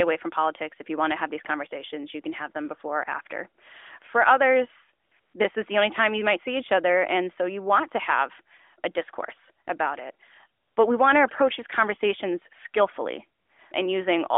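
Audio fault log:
5.06 to 5.12 s, 5.20 to 5.34 s, 10.62 to 10.76 s, 13.40 to 13.50 s: AMR comfort noise. Short gaps of 60 to 140 ms lose the real background. The phone judged them silent, so a smooth synthetic hiss fills in.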